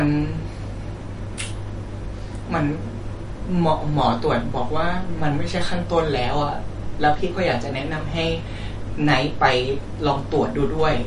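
MP3 compression runs through the whole speech clip, and it is the likely cause of the dull, watery quality heard from start to finish. Nothing remains above 10.6 kHz, where the encoder has cut off the treble to save bits, and the damage is plainly audible, which points to a low bitrate of around 40 kbps. With so few bits, weak frequency lines are dropped and return from frame to frame, giving a swirly texture, with chirpy s sounds and smeared onsets.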